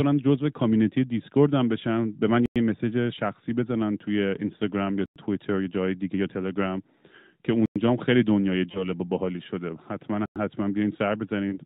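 Gaps between chunks at 2.46, 5.06, 7.66 and 10.26 s cut a 100 ms hole into the speech every 2.6 s. Each join between 2.5 s chunks leaves a short silence, so nothing is lost, but the sound is interrupted at each join.

Lost AMR speech frames at 8.72 s and again at 11.50 s, each consistent with a single dropped 20 ms frame, make the decoder reuse the previous pitch and vocal-tract settings at lower gain. The result is a brief dip or warble before the narrowband, sub-4 kHz voice recovers.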